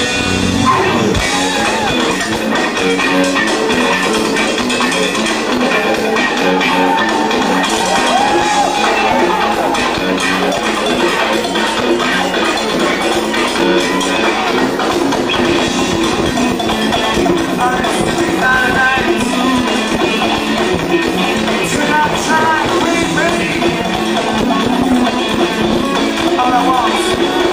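No technical faults are audible.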